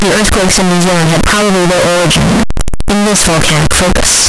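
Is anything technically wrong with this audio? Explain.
Yes. Throughout, the speech is buried in very loud, harsh distortion, with quiet moments as loud as the rest: likely signed and unsigned mixed up, flipping the top bit of what sounds like 16-bit samples.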